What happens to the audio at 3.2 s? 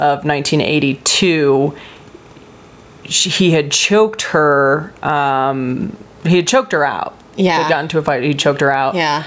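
Timecode bleed runs from 1.60 to 3.76 s, so 3.2 s falls inside it. Linear timecode at 29.97 frames per second is leaking into the speech from a neighbouring track or cable. Its square wave flips between pitches near 1 kHz and 2 kHz, giving a faint, steady chirping warble roughly 45 dB below the voice. On a spectrogram it appears as thin horizontal lines at 1 kHz and 2 kHz. The waveform shows almost nothing at that level.

Gain pumping is also present at this moment, as it is throughout the clip. The level swings by around 10 dB. It sounds as if the input gain is likely set far too high for the microphone, with a fast limiter or compressor pulling it down on each loud syllable. Loud and soft parts end up closer in level, so the speech sounds squashed. On the waveform the peaks look flattened.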